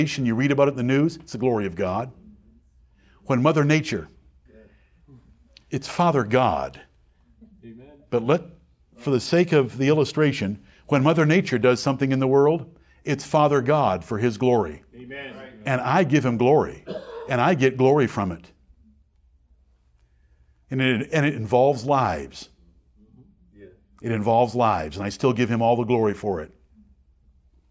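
Speech recording with no audible technical faults.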